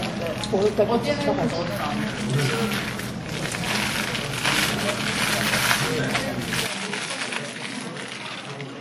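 Throughout the clip the sound carries the ringing, washy texture of WMA compression, likely from a lossy transform encode at a rate that fits roughly 48 kbps. Long transform blocks smear quantisation noise over tens of milliseconds, so transients blur and a hiss swells and fades with the signal. On a spectrogram, weak components are missing in patchy holes, and all energy stops at a hard ceiling near 18.1 kHz.

At 0.70 s a block of digital silence lasts 2 ms: a short run of samples was replaced by zeros, with no fade in or out. The abrupt drop to silence and back comes across as a single sharp tick rather than a hole. The waveform shows a brief flat line between two vertical edges, and the spectrogram shows a thin broadband stripe at that instant.

From 6.67 s to the end, the sound turns duller and slightly quieter, by about 5 dB, with no gap at the change. This is most likely the input switching to a poorer device. 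The new path passes nothing above 11.1 kHz, and a faint new noise floor sits far below the signal. On a spectrogram the upper band is cut off sharply at the switch point, and the waveform steps down in level.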